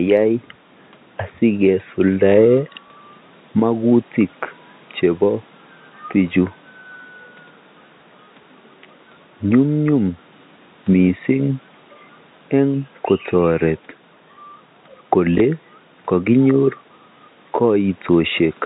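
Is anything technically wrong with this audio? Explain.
Yes. Packet loss with last packet repeated occurs at 2.88, 9.84 and 15.38 s: 20 ms goes missing, the previous packet replays, and each replay sounds like a small blip.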